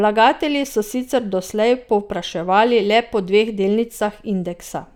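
No dropouts, clicks, distortion or level jumps are audible anywhere in the recording.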